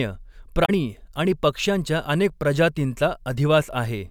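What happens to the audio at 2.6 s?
At 2.6 s the speech carries on intact, with no dropout, click, distortion or other audible fault at that moment.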